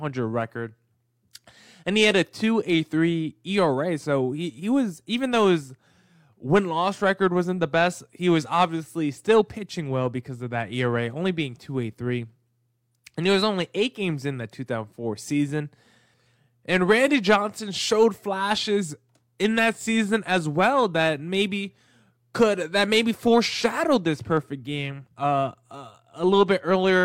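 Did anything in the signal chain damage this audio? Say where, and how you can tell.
No, nothing in this speech recording stood out as damage from any stage of the signal chain when listening to it.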